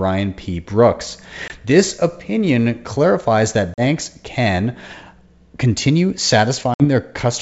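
Speech over a G.722 wideband link, with packet loss on an ADPCM call: hard-edged gaps at 1.48–1.51, 3.74–3.81 and 6.74–6.85 s, roughly one, two and three packets' worth. Each time the speech returns, the decoder's predictor and step size have drifted from the sender's, so it comes back slightly distorted before it settles.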